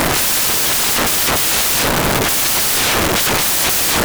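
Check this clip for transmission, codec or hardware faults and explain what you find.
There's one fault, and it runs the whole length of the speech: samples built from the wrong bytes. The reader is assembling each sample with its bytes misplaced, either shifted by one, swapped, or misaligned, so the rapidly flickering low-order bits end up driving the loud part of every value. What you get is a wall of loud, harsh broadband noise from start to finish, close to white on the louder sounds.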